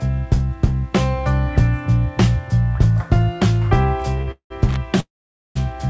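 Audio carried over a call link, with nothing above 8 kHz, which fits a wideband codec such as G.722 at around 64 kbps. A short stall from a late packet at 4.21 to 4.29 s holds the last sound for about 60 ms while the jitter buffer waits, appearing as a smeared, flat-topped stretch on the spectrogram with nothing lost afterwards. Call audio freezes follow at 4.31 to 4.52 s and 5.00 to 5.57 s, likely from packets held up in transit emptying the buffer. The first adds about 189 ms, the last 100 ms of it silent. The second adds about 552 ms, 480 ms of it silent. Each shows as a fading tail and then a blank gap in the waveform before the sound resumes where it stopped. Loose connector crackle at 4.69 to 4.77 s appears as an irregular burst of scratching, with scattered vertical broadband spikes on the spectrogram from a contact rapidly making and breaking.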